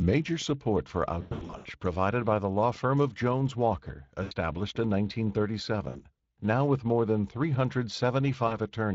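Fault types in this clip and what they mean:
Speex codec: A CELP speech codec running at a setting whose artefacts are plainly audible throughout; the speech sounds hoarse and grainy with a noisy, rough edge, and the coding damage fits a bitrate of around 20 kbps.
VoIP packet loss concealed by the speech codec: Lost packets were filled by extrapolating the last pitch and filter with falling gain. It is worst from 1.21 to 1.68 s, about 320 ms lost in bursts up to 100 ms, with shorter fading dropouts near 4.23, 5.89 and 8.47 s.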